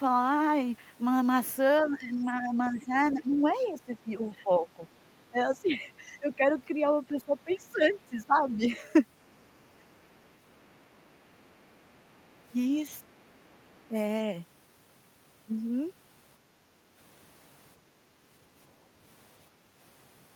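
From 1.87 to 8.61 s the speech repeatedly dips and recovers, about 4 s in all, at worst by roughly 15 dB. A shorter dip of about 10 dB follows at 13.88 s. This is speech suppressed in double talk, likely an echo canceller turning down this side's speech along with the loudspeaker echo while the two sides overlap. It differs from an ordinary level drop because it rises and falls with the overlap.

A faint second voice comes through at 5.11 to 5.61 s, 6.32 to 6.61 s, 7.21 to 8.56 s, 9.24 to 11.97 s and 13.06 to 13.87 s, some 30 to 40 dB below the speech. This is the other side's voice leaking through, likely loudspeaker playback the canceller left in the microphone. Unlike suppression, it adds sound rather than removing it.

From 17.82 to 18.2 s the room sound drops by about 6 dB and then returns. This is background gated by the echo canceller, which clamped the microphone while the loudspeaker played. 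Here the background ducks rather than the talker.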